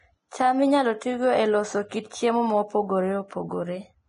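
Heavy lossy coding, likely Vorbis compression at a low setting, runs through the whole speech recording. The encoder has kept only a smooth outline of the spectrum and quantised the fine treble detail very coarsely, which fits a bitrate around 28 kbps. The top of the spectrum is cut off lower than normal, and the remaining upper band turns to hiss-like grain of similar energy, so sibilants sound gritty, voiced tones take on a rough edge, and consonant onsets are smeared.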